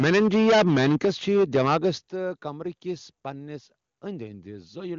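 From the start to 1.9 s the speech is harsh and crackly, its loudest peaks flattened, likely microphone overload, pushed about 14 dB past the converter's limit, with roughly a fifth of samples clipped. At 0.04, 1.05, 2.07 and 3.09 s the level drops abruptly by about 2, 8, 9 and 2 dB, likely the call software stepping the microphone volume down in response to that clipping.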